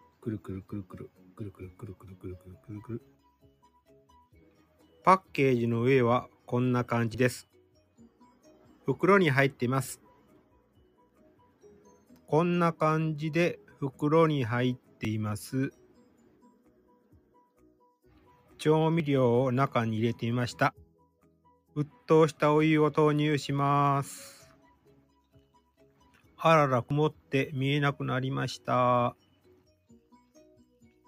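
Noise suppressor applied to music or sounds, running from the start to the end: a suppressor tuned for speech keeps treating sustained tones, ambience and decays as noise and pulls them down, so the level swings by around 10 dB. Onsets get through at close to full strength, but whatever is held or fading sinks right after it, giving a pumping, unsteady texture with thinned-out tails.

Sound cut by the noise suppressor, from 0.01 to 5.34 s: the suppressor clamps down here, with drops of about 12 dB across roughly three seconds of the stretch. Sustained material fades away and decays end early.

Audio missing between chunks, at 3.19 s: about 50 ms is absent, and the sound on either side is butted together with no gap. The result is a small skip, likely from processing in blocks about 4 s long that lose a sliver at each handover.

Sound cut by the noise suppressor continues at 6.28 to 6.48 s (about 10 dB), then 7.42 to 8.87, 9.96 to 12.31, 13.58 to 18.53, 20.85 to 22.07, 24.42 to 27.33 and 28.59 to 31.08 s, each dipping by about 12 dB.

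Audio missing between chunks recurs at 7.14, 11.10, 15.05, 19.00, 22.95 and 26.90 s, the same short jump-cut each time, almost exactly 4 s apart.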